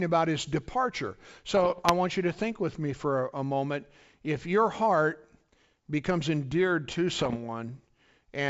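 Speech over a wideband link that sounds like full-rate G.722, with bit errors on an ADPCM link at 1.57–1.91 s and 7.19–7.37 s: pops and rough, level-jumping bursts, unlike packet-loss gaps, because each flipped bit, under one percent, derails the decoder's step size and predictor briefly.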